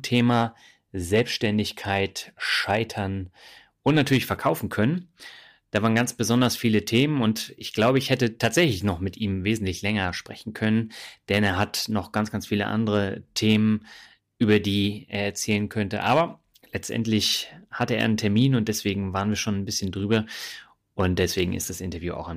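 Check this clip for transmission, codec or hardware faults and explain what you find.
One fault runs through the whole recording: hard clipping on the speech.

From start to finish, the loudest moments of speech carry a brittle crackle, a brief rasp riding on each peak rather than a constant fuzz. The signal reaches a stage that cannot pass it, overdriven by about 5 dB, so the tops of the biggest waveform excursions are sheared flat. Only a small fraction of samples, well under one percent, hit that ceiling, and those flattened corners throw off high harmonics that are heard as the crackle.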